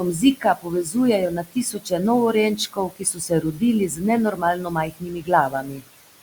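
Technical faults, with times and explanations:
Throughout: noise suppressor artifacts. The suppressor treats the steady room noise, which sits about 17 dB below the speech, as something to remove. It pulls those bands down by about 18 dB frame by frame. Because the reduction tracks the signal, the background drops away in the gaps and comes back under the speech.
0.00–0.96 s, 1.29–2.01 s, 2.56–3.62 s, 3.87–4.04 s, 4.31–5.30 s and 5.49–5.88 s: speech cut by the noise suppressor. In each span the suppressor mistakes quieter parts of the speech for noise and turns them down along with the background. Three spans each lose about half a second of material, the 4.31 s span closer to three quarters of a second, the 5.49 s one about 0.3 s, and the 3.87 s one only a brief moment. Drops reach about 17 to 19 dB, and about 10 dB at 3.87 s, so those parts sound swallowed or faint.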